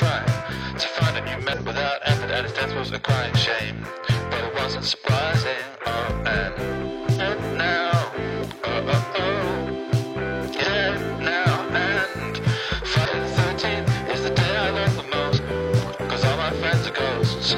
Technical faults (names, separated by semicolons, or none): damaged data in a compressed stream